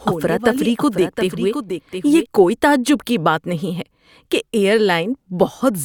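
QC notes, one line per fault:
0.00–2.26 s, doubled audio track: the speech arrives with a dry full-band copy roughly 0.7 s late and about 10 dB quieter. It is likely a second, slower capture path. A spectrogram shows faint repeated harmonic patterns offset in time, and the waveform's extra layer cuts off abruptly at 2.26 s.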